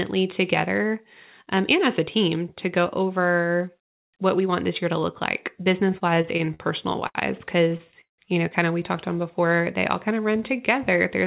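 From 5.99 to 7.17 s, and again from 7.69 to 8.20 s just before "you know kind of", the speech shows repeated stalls (stutter). Late packets kept emptying the jitter buffer. The receiver stretched the last sound to fill nine short gaps, then five gaps up to 174 ms, so the speech drags in jerks. From 9.41 to 10.79 s, after "of we talked on", a jitter buffer slow-down repeats pitch periods to rebuild its reserve. It adds 125 ms, so speech plays at 92% speed with unchanged pitch. Throughout, the narrowband call path leaves nothing above 4 kHz.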